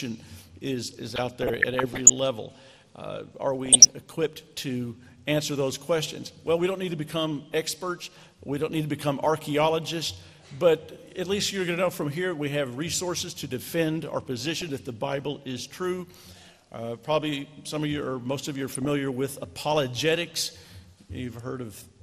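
Coarse MPEG Layer II coding, likely MP2 compression at around 80 kbps, has switched off upper sub-bands, leaving the audio dull with a gurgling, granular edge throughout. DAB burbling, where bit errors of a few tenths of a percent slipped past error correction, corrupts the audio at 1.10–2.10 s, 3.66–3.93 s, 14.61–14.79 s and 18.69–18.90 s, producing short blips of noise in single sub-bands.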